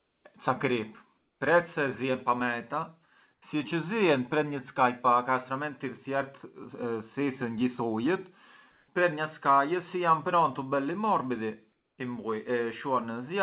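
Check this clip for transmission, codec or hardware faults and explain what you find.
Comfort noise in place of the background appears in five pauses in the speech: 0.00 to 0.24 s, 1.18 to 1.40 s, 3.34 to 3.42 s, 8.72 to 8.88 s and 11.72 to 11.98 s. The likely cause is discontinuous transmission: the sender goes quiet when it detects no speech, and the receiver synthesises steady noise roughly matching the background's spectrum. In these gaps the faint room background, about 50 dB below the loudest speech, gives way to a flat, featureless hiss. That hiss is about 2 to 5 dB quieter in four gaps and about 5 dB louder at 8.72 s. All of this sits within a narrowband call path with nothing above 4 kHz.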